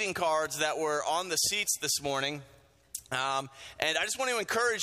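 No technical faults can be heard anywhere in the audio, and the signal stays intact and continuous throughout.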